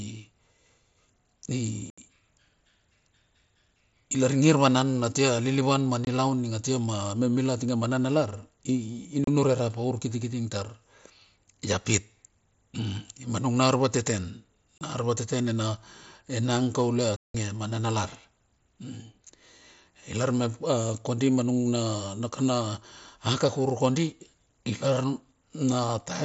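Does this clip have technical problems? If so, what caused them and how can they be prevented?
Yes: unconcealed Bluetooth headset packet loss cuts holes at 1.90–1.98 s, 6.05–6.07 s, 9.24–9.28 s, 14.78–14.81 s after "nung na arvateten", and 17.16–17.35 s between "enang kaule" and "ma mana lar". Lost radio packets were replaced by silence or an idle pattern, leaving sharp-edged gaps on the waveform and vertical bands on the spectrogram. Keeping the headset close to the phone, away from Wi-Fi interference, prevents this.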